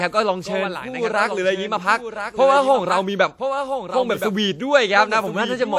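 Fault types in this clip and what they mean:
Doubled audio track: A second copy of the speech runs about one second behind the first, roughly 10 dB quieter. It sounds dry and full-band, with no room tail. It is likely a second capture through a slower path, mixed back in.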